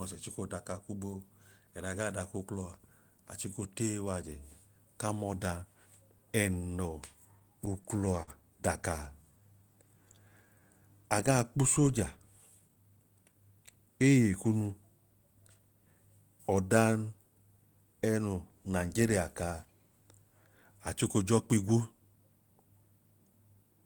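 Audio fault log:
7.39–8.30 s, repeated stalls (stutter): the speech catches and hitches seven times in under a second. Packets were turning up late, so the jitter buffer kept running dry, and each time the receiver just held onto the last bit of sound until the next packet landed. The longest hold is about 49 ms, adding up to 110 ms, roughly an eighth of that stretch. Nothing is actually lost, but it drags and stutters.
9.22–10.61 s, jitter buffer slow-down: the talker suddenly sounds a bit draggy, running at about 90% speed, yet the pitch stays put. The buffer was getting low, so the receiver quietly built up a cushion by repeating single pitch periods and slivers of pauses over and over, 148 ms added in all. That's why sounds feel stretched out instead of deeper, with maybe a faint warble.
12.55–13.33 s, jitter buffer speed-up: the reverse happens, with the speech sounding rushed at about 115% speed while the pitch holds steady. 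The buffer had more audio than it wanted, so the receiver trimmed out tiny chunks of one or a few pitch periods, again and again, to bring the delay down. About a tenth of a second goes missing across that span, which gives it that hurried, clipped-along feel.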